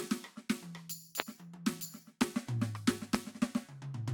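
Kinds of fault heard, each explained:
Loud pop: Three single, sharp pops sit on top of the music at about 1.20 s, 2.22 s and 3.15 s. Each lasts roughly 20 ms and peaks at about 25 dB above the surrounding signal. The music continues unbroken underneath each one. A brief voltage step or spike entering the signal path, likely from a plug, switch, static discharge or driver glitch, would produce this: the following circuitry shapes the spike into an abrupt click-like transient.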